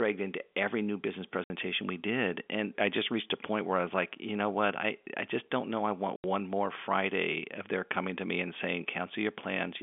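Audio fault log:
1.44–1.5 s and 6.16–6.24 s, packet loss filled with silence: the speech drops out abruptly for 60 ms right after "into every new business", before "we did", and again for 80 ms after "don't know I want". Each gap has hard edges. The receiver lost consecutive packets and played silence in their place. The gap lengths fit three and then four 20 ms packets, carried over an otherwise narrowband G.711 telephone line.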